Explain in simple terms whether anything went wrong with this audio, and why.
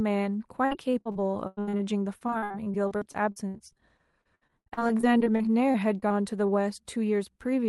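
Yes, something went wrong. From 0.65 to 1.81 s, and again from 2.19 to 6.50 s, the speech turns choppy and robotic, with small pieces dropping out. This is repeated packet loss: chunks of audio kept arriving late or not at all, and the call software filled each hole by stretching the last bit of sound. The holes are short, the longest about 96 ms, but they come so close together that roughly a third of the first stretch and a quarter of the second is patched-in sound.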